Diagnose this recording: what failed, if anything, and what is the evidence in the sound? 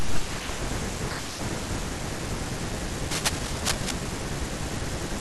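The analogue wiring stage most likely failed: a worn cable, connector or control was disturbed, and its contact resistance fluctuated rapidly, producing cable scratch noise. From 3.11 to 3.91 s, a dense, irregular burst of scratching and rustling sits over the speech, nearly as loud as the speech itself, at about 5 dB below it. The uneven, crackly texture comes from the contact's resistance jumping erratically while it moved, injecting noise directly into the signal path.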